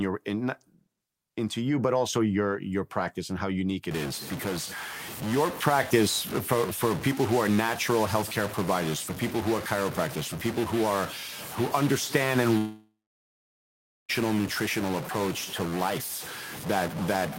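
From 3.91 s, after "practice and how unique", distortion runs to the end and fills pauses with noise, likely a stuck bit; unlike clipping, it persists even at low levels.

At 12.57 s what is likely a long network dropout loses about 1.5 s: a fading buzz or hiss, then about 1.2 s of near-silence, resuming at 14.11 s with the gap skipped, not delayed.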